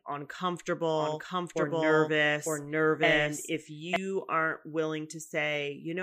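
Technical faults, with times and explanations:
0.96 to 3.96 s, doubled audio track: a second copy of the speech is mixed in, most likely because a slower capture path or an out-of-step edit is feeding the same signal twice. The copy trails by about a second and arrives at roughly the same level as the original, full-band and dry with no decay or room colour. Each passage is therefore heard again a moment later over the live sound, and the copy cuts in and out abruptly at both ends.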